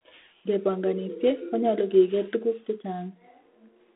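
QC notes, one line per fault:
Throughout, G.726 ADPCM: the speech has a gritty, rasping hiss riding on it that swells when the talker gets louder and drops back in quieter stretches, which fits 24 kbit/s, one bit per sample short of the usual 32 kbit/s DECT rate. The codec sends only the error against its running prediction, so with so few steps that error turns into level-tracking noise. The line band is roughly 250 Hz to 3.6 kHz, and nothing gets above 3.9 kHz.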